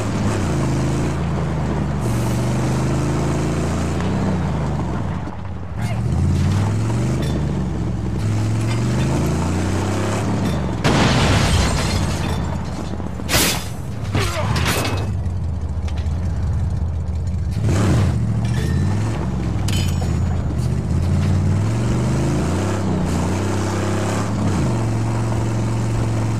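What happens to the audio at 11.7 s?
A dropped buffer (overrun) occurs at 11.68 s. The sound jumps forward abruptly, skipping roughly 40 ms with no gap of silence. This is likely because the samples were overwritten by the hardware before the program read them, so the two sides are joined directly.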